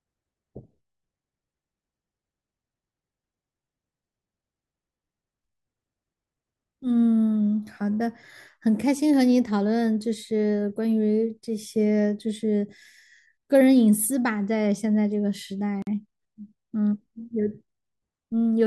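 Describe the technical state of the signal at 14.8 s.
Around 14.8 s the speech signal is intact, with no audible fault at that point.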